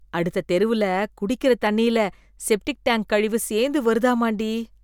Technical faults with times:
none

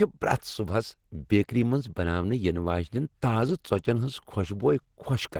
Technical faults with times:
0.00-5.39 Opus compression

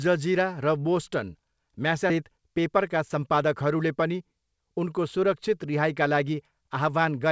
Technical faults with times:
2.10-2.12 skip ahead
2.21-4.22 jitter buffer speed-up

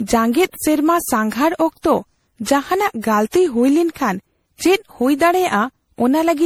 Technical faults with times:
0.00-6.46 generation loss

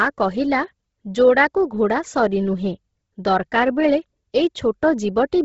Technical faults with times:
0.00-5.44 Bluetooth LC3 compression

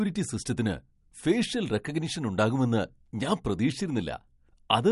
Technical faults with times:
0.00-4.92 MP3 compression

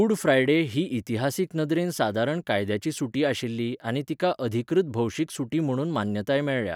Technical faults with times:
none

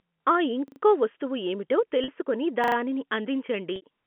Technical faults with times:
0.68-0.80 repeated buffer
2.04-2.08 packet loss with pitch repetition
2.64-2.76 repeated buffer
3.76-3.82 packet loss with pitch repetition

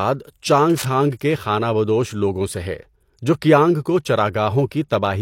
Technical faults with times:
0.70-0.85 cable scratch noise

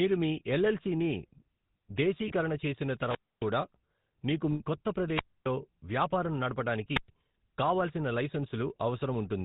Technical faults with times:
0.00-9.44 GSM full-rate codec
2.28-2.32 lost GSM frames
2.99-3.52 wireless microphone squelch dropout
4.52-4.61 lost GSM frames
5.13-5.49 wireless microphone squelch dropout
6.94-7.09 wireless microphone squelch dropout

